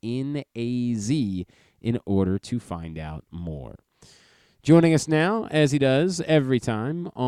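No technical faults can be heard anywhere in this recording. Nothing interrupts or disturbs the speech at any point.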